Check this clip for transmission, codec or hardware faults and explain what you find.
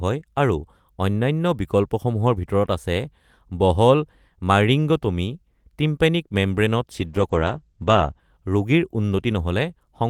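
There's one fault, a call bitrate drop from 6.92 to 8.27 s. The encoder is squeezed from 32 to 12 kbps and cuts everything above 8 kHz, so the speech goes coarse and muffled until the rate recovers.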